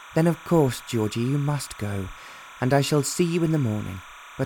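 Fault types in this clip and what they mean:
Timecode bleed: Linear timecode from a nearby track or cable has leaked into the audio path. The code is a square wave that flips between two pitches, here roughly 1 kHz and 2 kHz. It runs at 30 frames per second, so the flipping has a fast, regular rhythm. It sits about 20 dB below the wanted sound. It lasts the whole clip as a steady chirping warble in the background.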